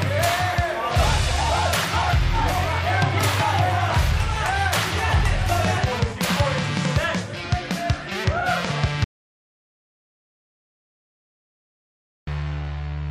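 At 9.04 s the sound stops abruptly and the clip falls into an audio dropout to silence lasting until 12.27 s, about 3.23 s in all. The gap holds silence with no background or room tone, and whatever was playing resumes mid-flow at 12.27 s. The likely cause is a lost input, such as a disconnected device or failed link, while recording carried on writing silence. On a waveform the trace flattens completely; a spectrogram shows an empty vertical band.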